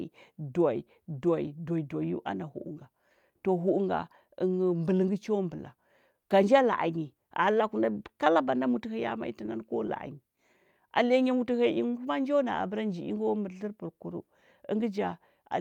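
Clock drift between sender and receiver runs through the whole speech clip. The sender's clock runs about 2% slow, so the receiver's jitter buffer keeps draining and must be topped up with repeated material. The effect is a faintly dragging, uneven pace.

Repeated timing corrections follow from this. From 0.33 to 8.97 s and again from 10.86 to 15.00 s, the receiver repeats short slices, playing at 98% speed. This adds roughly a fifth of a second in the first stretch and a tenth in the second, heard as small, irregularly spaced stutters.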